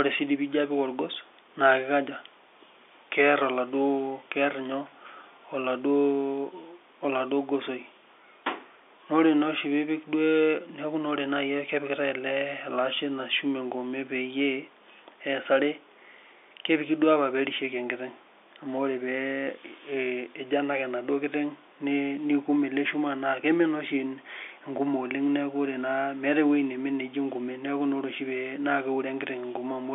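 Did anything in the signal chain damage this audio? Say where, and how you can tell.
No, nothing in the signal chain damaged this audio.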